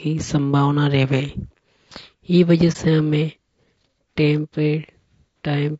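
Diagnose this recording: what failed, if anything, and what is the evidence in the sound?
Throughout the clip the speech sounds rough and grainy, with plainly audible codec damage: noise fills the gaps between harmonics and the top band sounds thin and synthetic. At the codec stage, this is most likely low-delay AAC compression, AAC-ELD at a bitrate that fits around 32 kbps. Its short frames resolve pitch harmonics coarsely, so on a spectrogram the harmonic stripes look smeared, with a noise floor between them and a patchy, blocky upper band.

A soft-edged dropout runs from 2.72 to 2.76 s, just before "से हमें". At the codec and network stage, this is AAC frame loss with muting. A frame went missing, and its length fits a single lost frame of about 30 ms. The decoder zeroed that frame's spectrum, and the overlapping windows faded the sound down and back up. The waveform shows a smooth taper into a brief dip, and the spectrogram shows a narrow low-energy column.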